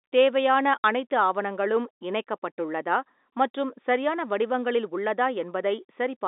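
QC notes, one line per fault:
0.78–0.84 s, packet loss filled with silence: about 60 ms of sound drops out just before "அனைத்து ஆவணங்களும் இணைக்கப்பட்டுள்ளதா மற்றும்". Missing packets were replaced with digital silence, so the gap has hard edges. Its length fits two lost 30 ms packets on this G.711 telephone line.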